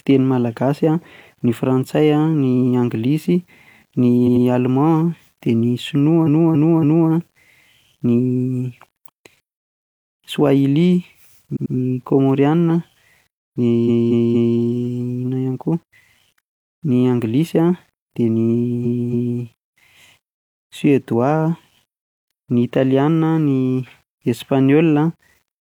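Speech runs through with a grainy, signal-following grit that is worst on soft syllables and word tails, where the quietest decays crackle or cut to silence. The likely cause is low bit depth without dither: the samples were rounded to something like 9 bits, leaving an error only about 45 dB below the voice that rises and falls with it. On a spectrogram the noise floor tracks the speech energy instead of sitting as a steady haze. A zoomed waveform shows visible stair-steps at low levels. Repeated frames cause stutters at 4.23–4.42 s and 11.52–11.71 s, where a 92.9 ms block plays two extra times. Longer stutters occur at 6.23–7.06 s, with a 278.6 ms block played three extra times, at 13.84–14.54 s, with a 232.2 ms block played three extra times, and at 18.81–19.37 s, with a 278.6 ms block played two extra times. The spectrogram shows identical patches tiled side by side, and the waveform shows matching copies back to back.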